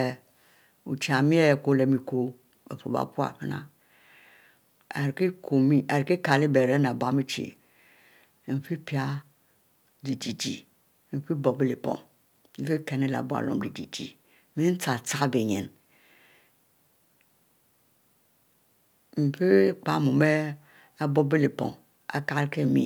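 Listening through the recording, nothing stood out as a technical fault at any point.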